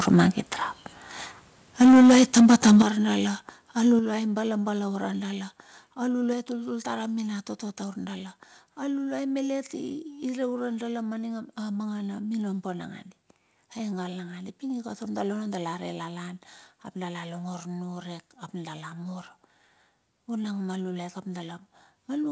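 Microphone overload occurs twice in this speech recording: briefly from 0.07 to 0.22 s, where peaks exceed the limit by about 3 dB and only a small share of samples are flattened, and heavily from 1.81 to 2.82 s, where the signal runs about 12 dB past the converter's limit and nearly a third of samples are clipped, giving the loudest syllables a harsh, crackling edge. The likely cause is an input gain set too high, so the converter cuts off waveform tops. Microphone volume stepped down three times, at 1.82 s by about 2 dB, at 2.82 s by about 9 dB, and at 3.99 s by about 5 dB. Each time voice and background drop together, abruptly, in the pattern of call software likely reacting to the clipping by lowering the device's input level in single jumps. The second and largest cut lands right as the long overload ends. Across the whole clip, nothing is audible above 8 kHz, which fits a wideband call codec such as G.722 carrying the audio.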